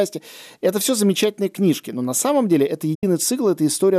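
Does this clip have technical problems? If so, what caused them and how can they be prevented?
Yes. A digital broadcast dropout occurs from 2.95 to 3.03 s. The receiver lost valid frames and muted, so the speech fades out within 8 ms and 72 ms is gone, consistent with three lost frames. Stronger reception, through better antenna placement or a more robust error-protection mode, prevents this.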